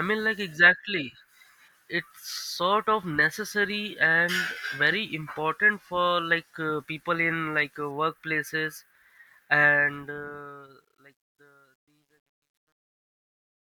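From 9.68 s to the end at 13.68 s, the speech fade-out shows truncation distortion on a fade. The level stage keeps only 11 bits without dither, so from 10.71 s onward the decaying tail turns gritty and stepped instead of dissolving cleanly.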